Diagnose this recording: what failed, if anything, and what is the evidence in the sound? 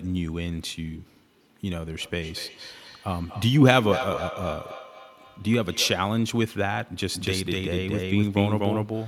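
The fault lies in call processing: a feedback echo between two devices. A second device in the same room replays the far end's audio, and the first device's microphone captures it again. Its echo canceller removes only what its own speaker plays, so this path passes straight through. From 2.01 s to 6.15 s, the sound returns at a steady interval of about a fifth of a second. The loudest repeat sits about 12 dB below the speech.

From 7.14 s to the end, the clip carries a doubled audio track. The likely cause is the same signal reaching the mix a second time through a slower capture path, or an edit that left two misaligned copies. A full-band duplicate trails the original by roughly a fifth of a second at much the same level. It has no decay or room colouring, and it begins abruptly at 7.14 s.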